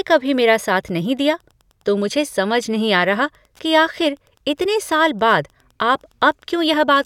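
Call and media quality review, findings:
Wi-Fi interference, throughout the speech. Faint steady ticking, roughly ten per second, sitting well below the talker. Nearby Wi-Fi radio's beacon every 102.4 ms getting rectified in the audio circuit. Check board layout and shielding, or move the radio away.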